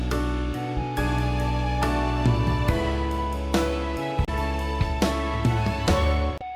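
Two brief glitches at 4.25–4.29 s and 6.36–6.42 s come from damaged data in a compressed stream, where the decoder loses frame sync.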